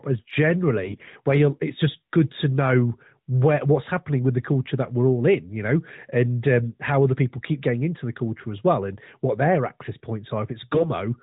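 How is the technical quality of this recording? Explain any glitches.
The speech comes through an AMR narrowband mobile codec, with nothing above 4 kHz and a lightly processed quality that fits its 12.2 kbps mode. Two short stretches are damaged by AMR bit errors.

From 0.82 to 1.15 s, and again from 10.72 to 10.90 s, the voice turns hoarse, scratchy and gargly while roughly holding its pitch and level. This is a weak mobile link flipping the loosely protected bits in the codec frames. The checksum over the important bits still passed, so the decoder used the frames anyway. Their pulse positions and fine pitch, gain and spectral values were corrupted. The first burst points to an error rate around one bit in ten, the second to about one in twenty.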